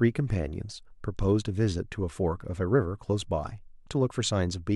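Listening through this short speech recording, nothing technical stood out.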